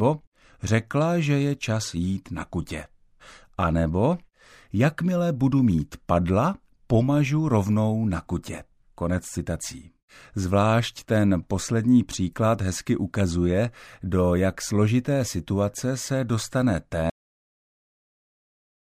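Right after "složité situace se dostane", at 17.10 s, there's a cut-off end: the final buffers never got written, so the speech stops mid-sound and falls straight into digital silence.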